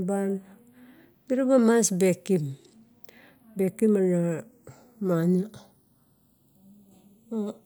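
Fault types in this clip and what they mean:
Channels drifting apart: The two sides of this speech were captured on separate clocks running about 50 parts per million apart, so the time offset between them creeps steadily across the clip, reaching roughly a third of a millisecond by the end. Folded to mono, the resulting comb-filter notches glide slowly through the spectrum, giving a gradual flanging sweep. A fixed channel offset would leave the notches parked in one place and sound only static and hollow.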